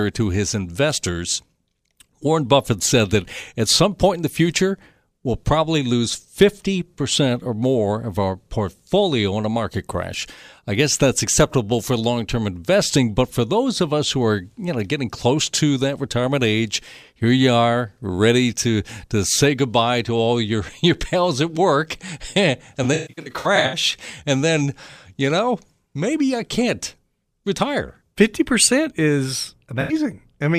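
AAC frame loss with concealment hits twice. From 22.83 to 23.76 s, about half a second of frames drop out in bursts, the longest around 150 ms. The decoder rebuilds them from the last good spectrum, leaving smeared, noisy, phasey patches. An 85 ms loss at 29.81 s gives one brief smear.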